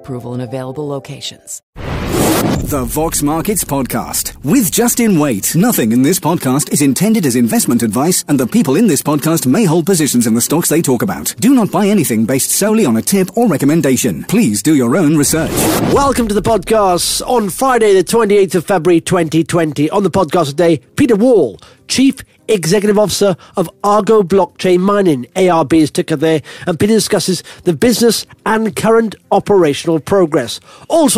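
No technical faults can be heard anywhere in this audio; the signal stays continuous and intact throughout.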